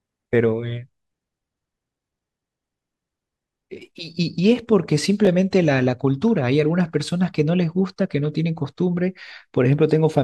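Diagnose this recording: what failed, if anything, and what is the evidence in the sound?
Chunks out of order at the driver or buffer stage: around 5.25 to 5.27 s, one 10 ms chunk plays one chunk late, giving a brief jumbled moment with three hard joins.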